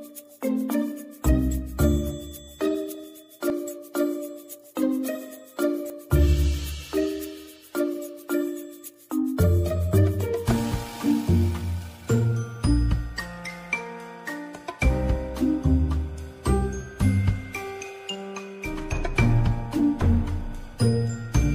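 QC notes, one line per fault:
3.5 s and 5.9 s: dropped buffer (overrun), likely. A jump forward, each losing around 20 ms, joined directly with no silent gap, unlike a dropout.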